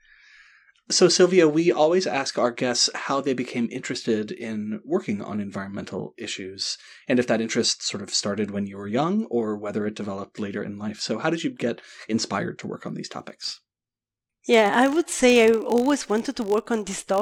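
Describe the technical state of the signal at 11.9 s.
At 11.9 s the speech signal is intact, with no audible technical fault at that moment.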